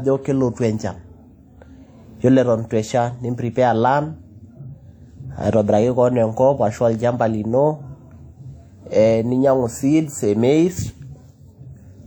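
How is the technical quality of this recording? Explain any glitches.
The recording carries plainly audible codec damage from start to finish, most likely WMA compression. A transform codec of this kind codes the signal in long blocks, so its quantisation noise smears across tens of milliseconds and the weakest spectral detail is discarded; the depth of the damage fits a bitrate around 48 kbps. On this speech it sounds ringing and washy, with a hiss that breathes along with the voice, even though content reaches up to about 20.1 kHz.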